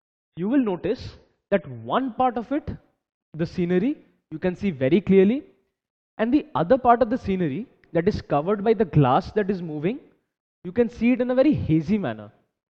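From 0 to 2.0 s, the adaptive stream starts at a low bitrate, which fits about 32 kbit/s AAC. The audio has thin treble and heavier codec artefacts, then improves abruptly without a gap.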